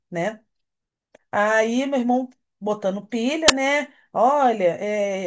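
At 3.48 s there's a short, hard-edged hiss of very loud white noise: file tags played as audio. An embedded cover picture, compressed data, got read as if it were samples, so its near-random bytes come out as a burst of loud static.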